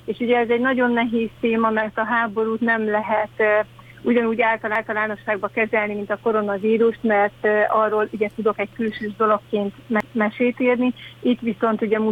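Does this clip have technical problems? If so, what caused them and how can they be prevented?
Yes. The audio was handled in 5-second chunks that overlap, each starting 250 ms before the previous one finished. This overlapping chunks fault makes a short stretch play twice at 4.75–5.00 s and 10.00–10.25 s, heard as a stutter. Aligning chunk boundaries exactly, or trimming or crossfading the overlap, prevents it.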